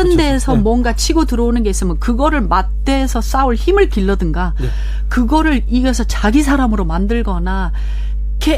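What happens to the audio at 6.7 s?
At 6.7 s the speech sits on top of mains hum that runs through the entire clip, not just this moment. A ground loop or a nearby transformer is letting the 50 Hz power line leak into the signal path, so a steady low tone at 50 Hz, with a few low harmonics above it, drones underneath. It is roughly as loud as the speech itself, so it competes with the voice rather than lurking in the background.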